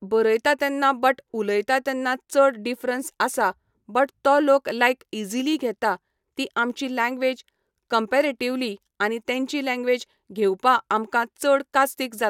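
A short speech recording, and nothing technically wrong can be heard in it. No moment in the audio calls for a timestamp or a cause.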